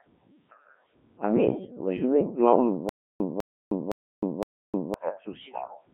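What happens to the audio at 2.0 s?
At 2.0 s the speech is passing through a Codec 2 vocoder, as it does for the whole clip. No waveform survives this stage. The decoder rebuilds each frame from pitch, voicing, energy and a spectral envelope using summed sine waves. Damage is heavy, and the voice sounds robotic and buzzy, which fits a very low rate of roughly 1.3 kbit/s.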